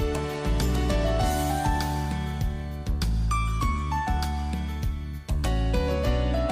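No technical faults can be heard anywhere in the audio, which stays continuous and intact throughout.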